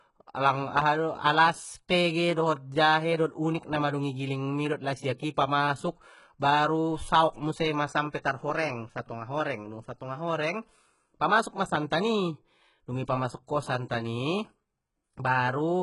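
Speech throughout carries the signature of HE-AAC compression: the treble stays bright but sounds synthetic, with gritty, metallic s sounds and nothing above 11.1 kHz. Unlike a plain low-pass, where the top simply goes dull, the upper band here is present but rebuilt from lower bands, so its harmonics do not match. The heavy damage likely comes from a very low bitrate, around 12 kbps. At 13.47 s, between "i dung i pamasuk" and "santan i", there is a pre-echo, a hiss of about 13 ms before the attack that softens it. A click or reverb tail would fall on or after the attack, not before it.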